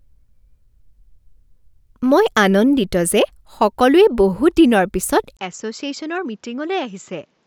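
At 5.37 s there is a 20 ms gap. The speech then turns dull, capped at 7.6 kHz, and quieter. The input likely switched to a poorer device.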